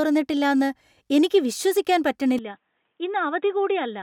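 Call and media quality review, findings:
Input switched to a poorer device, 2.39 s to end of clip, right after "എനിക്ക് വിശ്വസിക്കാൻ". Speech abruptly turns dull and boxy, nothing above 3.8 kHz, level down about 10 dB, faint new noise floor, no gap at the switch. Likely an input-device change mid-recording, e.g. a headset call profile with a narrower band.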